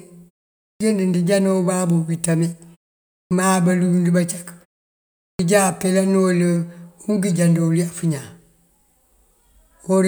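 Speech, with a clipped start after a pause at 0.72, 3.21 and 5.31 s. Each pause runs about half a second or more, the output device drops to sleep, and it takes roughly 80 to 100 ms to wake, so those onsets arrive chopped off.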